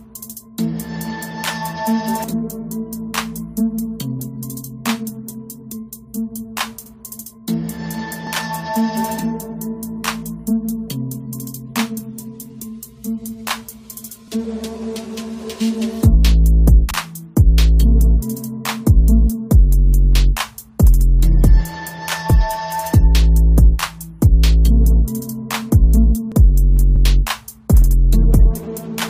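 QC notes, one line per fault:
8.27 s and 26.32 s, overlap between stream segments: a tiny skip where the waveform jumps, as about 17–19 ms were trimmed at 2-second segment boundaries with overlapping time stamps.
16.91–16.96 s and 26.96–27.01 s, overlapping chunks: a brief stutter as 50 ms plays twice, since each 10-second chunk starts before the previous one ends.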